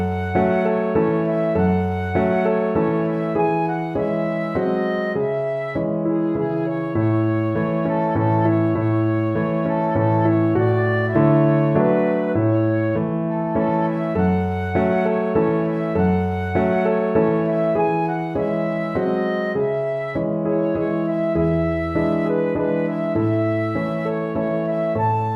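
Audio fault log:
No faults detected.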